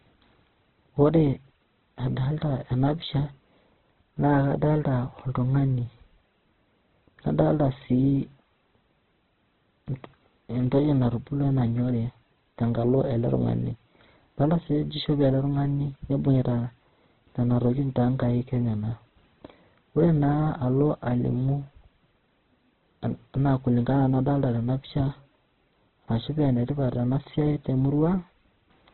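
From start to finish the speech is band-limited with nothing above 4.1 kHz, sounding grainy and rough rather than swirly, which likely points to heavy Opus compression near 12 kbps. From 0.1 s to 28.92 s a soft, even rattle of clock slip clicks runs about every 0.04 s, likely from unsynchronised clocks differing by about 500 ppm. Their strict regularity sets them apart from random dropout clicks.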